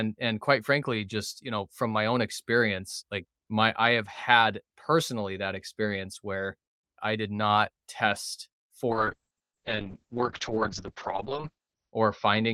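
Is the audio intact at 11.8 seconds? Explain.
No. A call bitrate drop runs from 8.9 s to the end of the clip, so 11.8 s sits inside it. The bandwidth estimate fell and the encoder was pushed from 40 kbps down to 6 kbps, holding that floor for about 3 s. At so few bits the speech is coded coarsely and the audio band shrinks from 20 kHz to 6 kHz, so at 11.8 s the speech sounds muffled and rough, with a watery texture and no top end.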